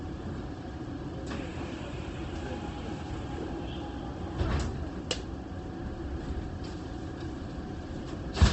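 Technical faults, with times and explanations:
Throughout, Opus compression: the sound is grainy, rough and noisy in texture, with nothing above about 8.3 kHz, giving a dulled top. This is likely low-rate Opus in its music (CELT) mode, which fits roughly 16 kbps, filling starved bands with noise and folded copies.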